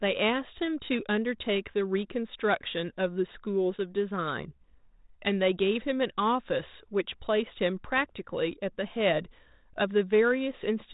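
Nothing here needs flagging, since the speech comes over the G.726 link at 32 kbit/s with just the light graininess and narrow telephone band that codec brings, and there's no fault anywhere in the clip.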